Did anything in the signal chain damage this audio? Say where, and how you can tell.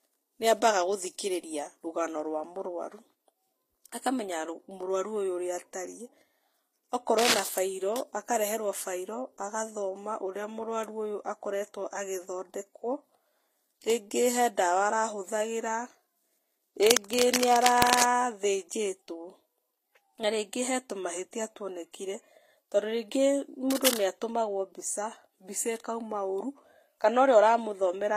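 Yes. At the codec stage, the whole clip carries transcoding between lossy codecs, likely a low-rate HE-AAC encode, around 24 kbit/s, re-encoded to Vorbis near 45 kbit/s. The speech has two layers of coding artefacts heard together. On a spectrogram, energy stops flat at 16.5 kHz, and the upper bands show patchy, blocky holes, since the second encoder spent bits on the first one's artefacts and added its own.

In the analogue wiring, cable scratch noise appears at 7.18–7.40 s, 16.79–18.04 s and 23.70–24.06 s, likely from a worn cable or connector being moved. Dense, irregular crackling rides over the speech at roughly the same loudness as the voice. A waveform shows ragged clusters of sharp spikes in those windows, and a spectrogram shows broadband vertical streaks, because the rapidly changing contact resistance modulates the signal.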